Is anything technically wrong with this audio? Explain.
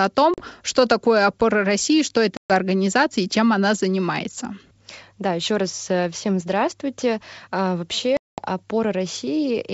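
Yes, there is packet loss on an ADPCM call. Audio went missing at 0.34–0.42 s, 2.37–2.51 s and 8.17–8.38 s, holes of about 40, 130 and 210 ms that were filled with silence. The receiving decoder's adaptive predictor and step size then drifted out of step with the sender's, so after each hard-edged gap the sound returns with some distortion, settling within tens of milliseconds.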